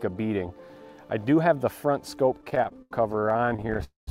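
From 2.41 s to 3.84 s the sound drags and stutters through 27 short stalls, the longest 86 ms, each bridged by a smeared continuation of the preceding sound. These repeated stalls (stutter) come from packets arriving late, draining the jitter buffer, so concealment fills about 386 ms and nothing is lost.

At 3.84 s the audio locks into a call audio freeze: the last sound is held as a fading buzz that sinks to about 150 ms of silence before resuming at 4.09 s. This is likely packets held up in transit emptying the buffer, inserting roughly 231 ms of delay.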